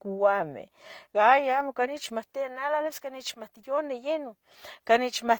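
Throughout the speech, two kinds of coding artefact sit on top of each other, which points to transcoding between lossy codecs, likely a low-bitrate HE-AAC encode around 40 kbit/s that was then re-encoded to Opus near 32 kbit/s. Unlike a single lossy pass, the damage has mixed character: the later encoder spends its bits reproducing the earlier artefacts while adding its own. The band still extends to about 20.1 kHz, so there is no obvious dull cut-off.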